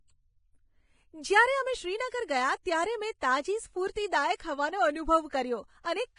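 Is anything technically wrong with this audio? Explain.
Yes, there are two faults in this speech clip.

Vorbis compression, throughout: everything above 10.5 kHz is gone, and heavy, grainy, hissy treble points to a likely Vorbis encode at a low bitrate, around 26 kbps.

Pre-echo, 3.91 to 3.96 s: the codec spreads the attack's noise backwards through its block, so a short hiss runs about 47 ms ahead and smears the onset.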